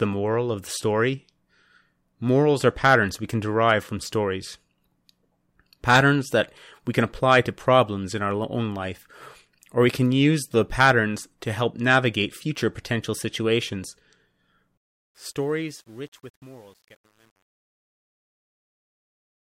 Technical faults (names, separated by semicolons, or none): truncation distortion on a fade